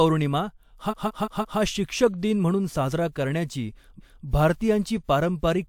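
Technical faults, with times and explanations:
0.90–1.58 s, repeated frames: a 170.7 ms stretch of the speech plays four extra times in a row, heard as a stutter. The same block of compressed frames, which fits about four frames, was decoded again on each pass, lengthening the clip by 682.7 ms.
3.97–4.22 s, repeated frames: right after "म्हणून साजरा करण्याची", a 256 ms block is heard once more, giving a single stutter. This points to a run of about six compressed frames being written or sent twice, adding 256 ms to the audio.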